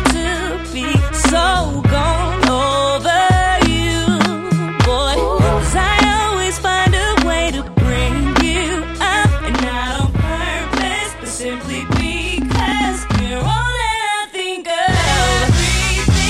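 From 9.54 s to 15.07 s there is channel delay (doubling): one channel runs 40 ms behind the other, and summing them to mono makes the late copy audible as an equal-level double. Unlike comb filtering, it is a distinct repeat, and unlike reverb, it doesn't decay.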